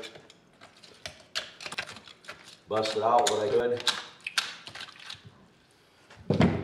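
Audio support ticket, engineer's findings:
Audio jumps forward twice. 1.74–1.84 s: roughly 0.4 s of material missing. 3.51–3.60 s: roughly 0.2 s missing. Compressed frames skipped. Decoder side: whole coded frames absent from the file or rejected as corrupt, so playback resumes later by whole frames.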